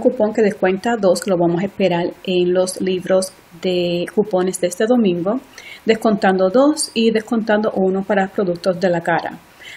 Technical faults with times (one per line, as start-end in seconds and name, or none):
none